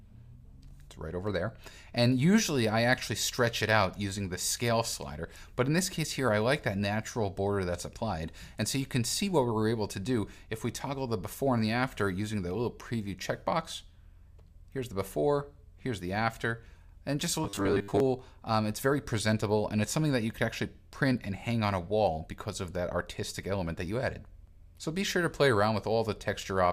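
From 17.44 to 18.00 s there is robotic sound from repeated short buffers: a rigid, metallic 100 Hz buzz replaces the natural texture. The likely cause is audio arriving too slowly, so a segment of about 10 ms is replayed over most of the missing signal.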